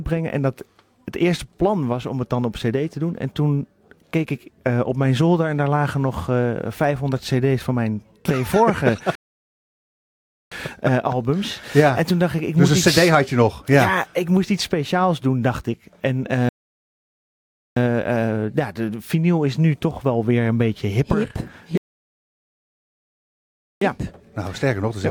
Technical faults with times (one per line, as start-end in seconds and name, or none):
9.15-10.52 rebuffering stall
16.49-17.76 rebuffering stall
21.77-23.81 rebuffering stall